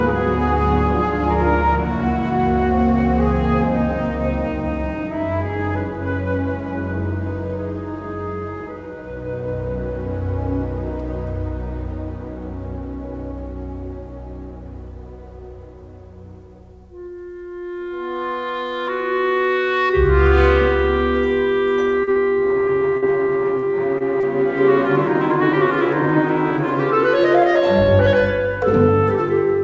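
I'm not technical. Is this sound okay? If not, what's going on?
No. Between about 22 and 24 seconds the call connection briefly hiccups several times.

Short concealed packet loss, at 22.04 to 22.10 s and 23.58 to 23.65 s: a few hundredths of a second never arrived, and the receiver papered over it by continuing the last sound. You hear a brief smear or wobble, and a tiny bit of sound is actually gone.

Short stall from a late packet, at 22.11 to 22.19 s, 23.98 to 24.03 s and 24.20 to 24.26 s: here the sound arrived late rather than being lost. The receiver held the last sound for a moment while it waited, so a sound lingers too long, but nothing is skipped.

Burst of packet loss, at 22.97 to 23.05 s: a slightly longer gap had to be filled. The filler is held and fades into a buzz or hiss before the audio picks up further on. It is longer than the smears, and a piece is lost.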